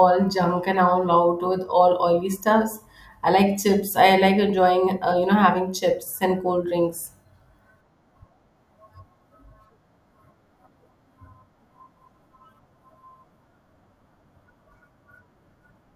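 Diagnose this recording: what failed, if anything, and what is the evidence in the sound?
A crude rate conversion failed at the sample-format conversion stage. From 7.06 s to 8.56 s the speech picks up a gritty, inharmonic fizz that tracks its louder and brighter parts. The added error sits roughly 15 dB below the speech. The pattern fits a 32 kHz to 44.1 kHz change done by linear interpolation without an anti-aliasing filter. That ratio sets a repeating error cycle, which folds into shifted, inharmonic copies of the speech.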